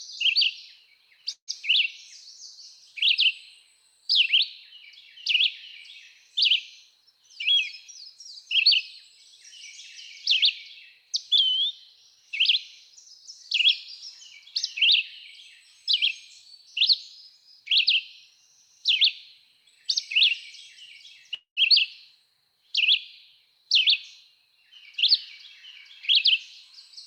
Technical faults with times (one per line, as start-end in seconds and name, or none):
1.33-1.50 call audio freeze
6.90-8.53 jitter buffer speed-up
10.98-12.23 jitter buffer speed-up
21.34-21.59 call audio freeze
23.46-24.54 jitter buffer speed-up